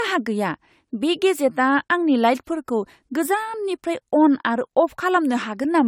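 Throughout, the speech sounds swirly and hollow with blurred attacks, worse than one AAC-LC encode near 96 kbit/s would leave. The likely cause is generation loss from roughly three passes.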